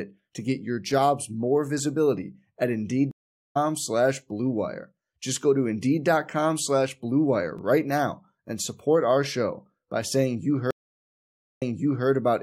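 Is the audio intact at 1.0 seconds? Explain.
Yes, the speech at 1.0 s plays through cleanly, with no dropout, click, distortion or other fault at that point.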